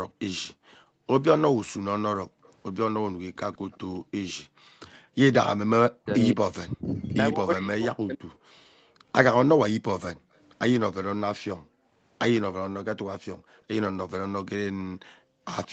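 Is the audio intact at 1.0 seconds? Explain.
No. An echo leak runs from 0.37 to 12.4 s, covering this moment. A faint, delayed copy of the speech trails it by 156 ms, roughly 25 dB below the direct sound. The likely cause is a far end playing the call on a loudspeaker, where the echo canceller failed to remove everything its microphone picked up and sent the remainder back.

The background is also gated by the echo canceller between 0.54 and 5.16 s. While the loudspeaker was active, the canceller pulled the microphone down hard, by up to about 40 dB, so the room sound dips or vanishes in gaps adding up to around a second in total, then returns when the canceller releases.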